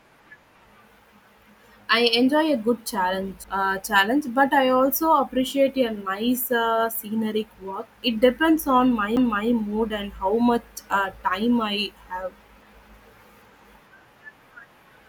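At 3.44 s and 9.16 s, CD skips: the laser jumps tracks, muting a few milliseconds with a tick, then resumes elsewhere in the speech, unlike a dropout, which simply leaves a gap.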